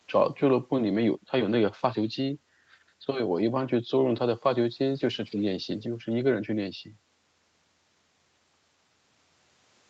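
No faults can be heard anywhere in the speech.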